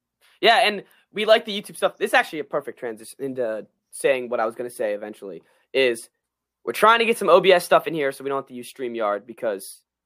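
Nothing technical goes wrong anywhere in this recording, so there's no fault to point to at any moment.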